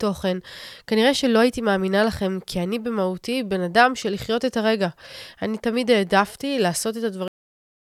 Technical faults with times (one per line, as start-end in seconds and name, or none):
7.28-7.90 cut-off end